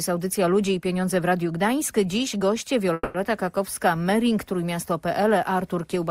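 At 2.93 s the audio stalls in a call audio freeze that lasts until 3.16 s. The last sound is stretched into a buzzy or hissy tail that fades over about 210 ms, then about 20 ms of silence follows before the audio resumes exactly where it stopped, with nothing lost but everything after it now running about 210 ms late. The likely cause is delayed packets draining the jitter buffer. On a spectrogram the tail shows as smeared, repeating horizontal bands that fade into a brief blank column, and the waveform shows a decaying envelope and then a flat stretch.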